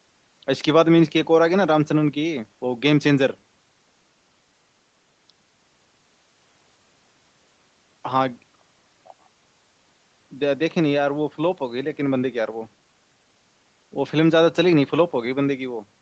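No technical faults can be heard in this speech recording. It carries the sound of normal call microphone processing, with nothing above 8 kHz and the lowest bass taken out by its high-pass filter.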